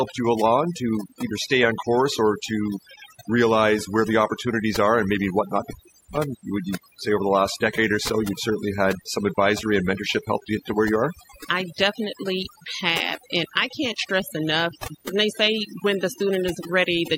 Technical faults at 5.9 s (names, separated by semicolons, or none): overdone noise removal; cable pulled and plugged in